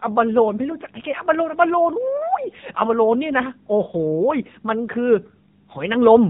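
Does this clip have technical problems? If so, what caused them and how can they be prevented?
Yes. The whole clip has been through the AMR narrowband mobile codec, and the damage is plainly audible from start to finish. Nothing above about 4 kHz comes through, so the speech sounds boxed-in and phone-like, and there's a coded, synthetic edge. The codec rebuilds speech from a vocal-tract model fed by a handful of pulses in each 5 ms, and the rough, lean character fits one of its lower modes, around 7.4 kbps. To prevent it, record or route the audio through a wideband path, or at least use a higher AMR bitrate, instead of a narrowband mobile link.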